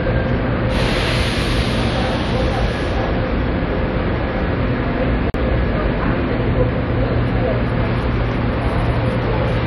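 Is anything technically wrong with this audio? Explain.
Yes. At 5.30 to 5.34 s there is a gap at a join of encoded pieces: separately encoded segments were butted together untrimmed, so encoder start delay and last-frame padding leave roughly 44 ms of silence, with smeared edges, before the sound resumes where it stopped.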